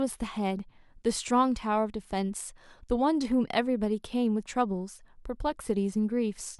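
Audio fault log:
No technical faults can be heard in the speech signal, which keeps continuous playback throughout.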